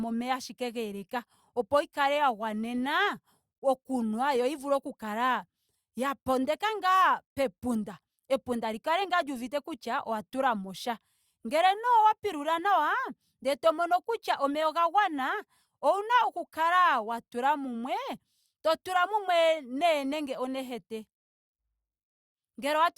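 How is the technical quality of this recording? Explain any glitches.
No glitches or technical faults are audible anywhere in the speech recording, so there is nothing to explain.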